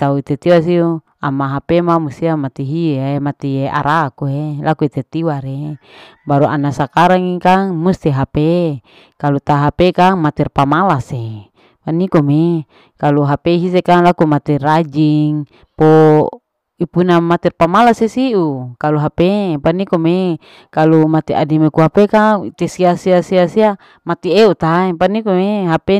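Hard clipping runs through the whole speech clip: it's driven about 8 dB past full scale, so roughly one or two percent of samples get flattened, giving crackly, harsh peaks.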